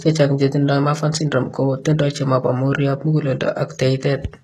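Throughout the speech, the sound points to HE-AAC compression, likely at a very low rate that fits about 16 kbps. The lower band is coded directly, while the treble is rebuilt by spectral band replication, copying lower bands upward under a coarse envelope. The damage is plainly audible: s sounds turn gritty, metallic and lisping. On a spectrogram, the upper band shows repeated, blocky copies of lower-band patterns with misaligned harmonics, and nothing at all above 12.3 kHz.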